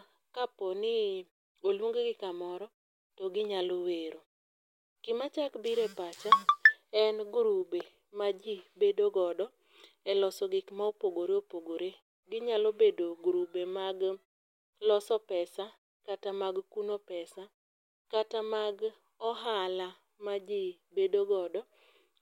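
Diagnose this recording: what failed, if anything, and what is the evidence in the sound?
Nothing in this speech recording points to a failure at any stage of the chain. In the pauses the background fades to silence and comes back in time for the next sound, which is the muting of pauses doing its job without clipping any speech.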